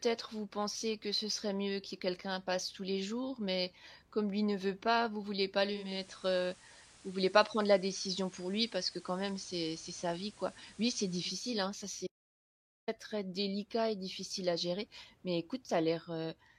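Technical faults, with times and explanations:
5.63–11.64 s, digital radio blending to analogue: right after "veut pas vous vouliez" the receiver loses the digital stream and cross-fades over about 482 ms to the station's FM broadcast. The level shifts about 1 dB, and hiss sits roughly 25 dB below the sound.
12.07–12.88 s, audio dropout to silence: the sound cuts off abruptly into silence for about 0.81 s, with no room tone at all, then resumes mid-flow on "très délicat et difficile". The likely cause is a momentary loss of the input while the recorder kept writing silence.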